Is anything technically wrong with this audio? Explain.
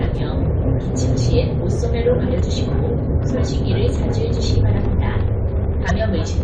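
Yes. Damaged data in a compressed stream occurs at 2.37–2.41 s and 5.87–5.91 s. Corrupted bytes make the decoder misread frames and lose sync, producing brief blips.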